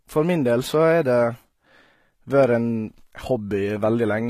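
From start to finish the speech has a plainly audible codec sound, likely from HE-AAC compression at a low bitrate, something like 20 kbps. The upper range is not the original: it is rebuilt by copying lower bands upward, so s sounds turn gritty and metallic, with harmonics that fail to line up above the crossover. On a spectrogram the treble looks smeared and blocky, repeating lower patterns, and nothing appears above 14.9 kHz.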